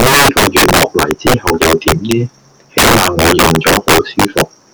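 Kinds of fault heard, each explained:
Integer overflow: Throughout the speech, the louder syllables break into harsh, violent cracks that are far sharper and more explosive than ordinary clipping. The signal was pushed about 12 dB too hot, and where it passed the largest value the integer format can hold, it wrapped around to the opposite extreme instead of being held at the limit. Roughly one sample in fourteen crosses that line, so every strong peak snaps across the full range.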